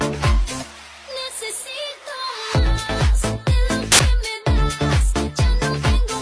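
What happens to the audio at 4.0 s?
A sudden, very loud burst of white-noise static with hard edges cuts in from 3.92 to 3.99 s, just before 4.0 s. This is file tags played as audio: an embedded cover picture's compressed bytes were read as samples, which come out as dense, random-looking noise.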